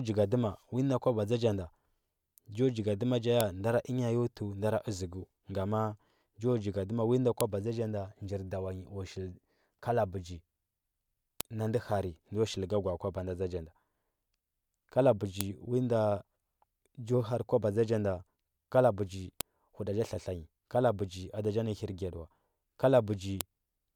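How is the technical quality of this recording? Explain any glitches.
The recording is marred by a repeating file header played as audio. Sharp, loud clicks land at 3.41, 7.41, 11.41, 15.41, 19.41 and 23.41 s, every 4 s. One follows "jo jigadima ja" and another precedes "na ndɚ". Each marks a joined piece whose header bytes were played as sound.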